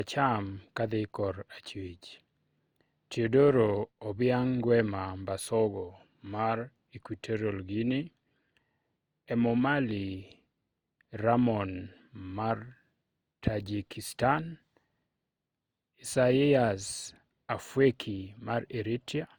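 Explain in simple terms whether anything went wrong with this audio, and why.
The speech was likely compressed and recompressed about four times, called generation loss, so from start to finish it sounds swirly and hollow, with blurred word starts.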